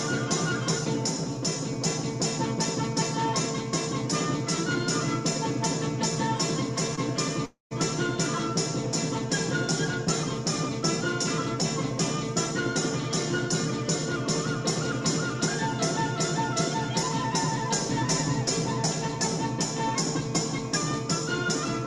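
A call recording with two timing faults close together. At 6.95 to 6.99 s there is a short stall from a late packet. The sound holds for a moment, with a faint buzz or dip, then carries on from the same point. About 20 ms is filled in and nothing is lost. The packet arrived after its slot, the jitter buffer ran dry, and the receiver stretched the last sound to cover the wait. Everything after it plays 20 ms later. Half a second on, from 7.45 to 7.73 s, comes a longer call audio freeze. The last sound continues as a fading buzz or hiss, then drops to silence for about 130 ms. Then the audio resumes exactly where it stopped. Roughly 254 ms of filler is inserted, with nothing missing. The likely cause is packets held up in transit, which emptied the jitter buffer again. The playback delay grows by the same 254 ms.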